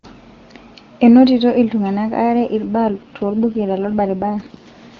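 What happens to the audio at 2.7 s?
At about 2.66 s the sound turns rougher and more synthetic, with a buzzy, raspy edge. It stays that way until about 4.68 s, with no gap and no narrowing of the band. This is an AMR rate drop. The wideband codec, clean before this point, is switched to a lower mode that spends more of its bits on error protection and fewer on detail, which fits a fall from 23.85 to 8.85 kbit/s.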